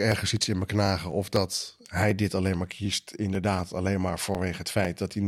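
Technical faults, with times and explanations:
0.12–5.1 s: periodic USB or driver dropouts. Roughly a millisecond of speech is skipped every 0.25 s, heard as steady ticks while sound plays.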